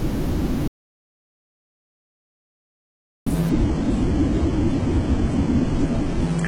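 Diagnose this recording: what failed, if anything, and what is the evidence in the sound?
The input path was likely disconnected, so the recorder wrote silence: an audio dropout to silence from 0.68 to 3.26 s, with no room tone.

At the network and codec stage, the adaptive stream dropped to a lower bitrate from 3.5 s onward: nothing above 10.8 kHz, which fits a switch to low-rate HE-AAC.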